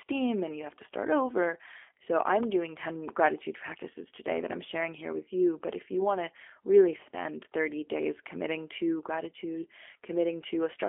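From start to end, the speech passes through a G.729 codec. The sound points to an 8 kbit/s VoIP link. Each 10 ms frame is rebuilt from a vocal tract model, pitch and a few pulses. The band runs only from 300 Hz to 3.4 kHz. The speech sounds rough and synthetic.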